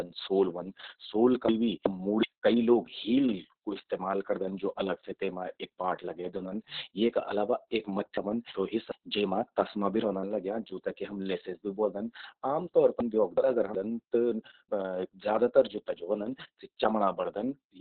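Throughout, the speech carries heavy Opus voice compression. Nothing reaches above about 4.4 kHz, so the band is narrowband and the voice sounds muffled and boxy. The coarse linear-prediction excitation adds a hoarse, slightly robotic grain to vowels. That degree of damage fits the SILK coder running at a very low bitrate, around 6 kbps, with long frames of about 60 ms.

Chunks out of order occur at 1.49 to 2.23 s, 8.17 to 8.92 s and 13.00 to 13.75 s. Each span is two segments of about 0.37 s played in swapped order, with one chunk arriving one slot late. No audio is missing, but the sequence jumps backward and then forward again. Each event sounds like a brief jumbled stutter, with three hard joins where unrelated waveform edges meet.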